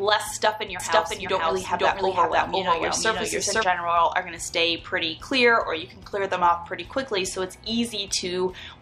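From about 0.80 to 3.64 s there's a doubled audio track: a second full-band copy of the same sound runs roughly half a second behind, at about the same level, dry and with no decay, cutting in and out abruptly. Likely cause is a second, slower capture path, or an edit holding two out-of-step copies.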